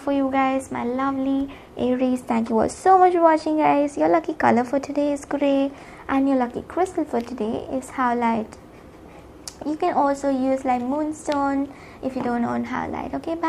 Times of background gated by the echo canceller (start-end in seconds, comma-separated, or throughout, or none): none